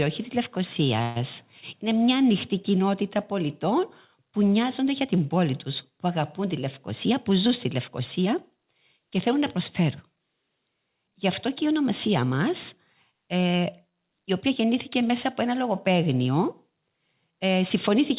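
It's a speech recording carried over a call path, and nothing above 4 kHz survives, which fits a narrowband codec like G.711 A-law. From 1.02 to 1.19 s the sound stalls and the last bit is stretched into a short fading buzz for roughly 136 ms before the talker picks up exactly where they left off. Nothing is lost, just a gap pushed in, so it's most likely a call audio freeze. Then from 6.38 to 8.74 s, right before "και θέλουν να", there's a jitter buffer speed-up. The buffer had built up too much audio, so the receiver trimmed tiny pitch-period slices over and over, around a tenth of a second in total. The speech runs about 5% fast at unchanged pitch and feels a touch rushed.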